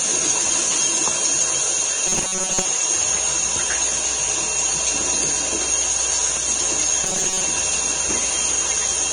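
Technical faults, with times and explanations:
Throughout: Vorbis compression. Hissy, grainy treble, likely from heavy low-bitrate Vorbis coding, around 26 kbps, that turns fine detail into noise.
2.07–2.65 s and 7.04–7.43 s: robotic sound from repeated short buffers. A rigid metallic buzz at 188 Hz, likely from repeating about 5.3 ms chunks, replacing most of the sound in the first burst and about half in the second.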